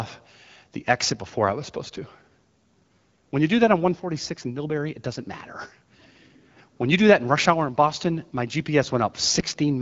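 Speech over AMR-WB at 12.65 kbit/s, no faults.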